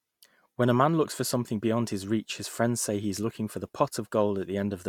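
No technical faults turn up anywhere in this recording; the speech just runs along without a hiccup worth pointing out.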